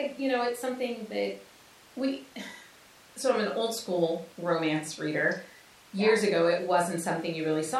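Nothing goes wrong anywhere in this bit of speech, so there's no technical fault to point to at any moment.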